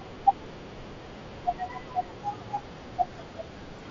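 Concealed Bluetooth headset packet loss occurs at 1.19 s and 2.56 s. Headset packets went missing for 15 ms (fitting two lost frames) and 7.5 ms, and the receiver patched each gap with a matching recent stretch of waveform. The single-frame loss at 2.56 s is a near-hidden blip under the light mSBC grain, while the two-frame run at 1.19 s holds a brief buzzy tone.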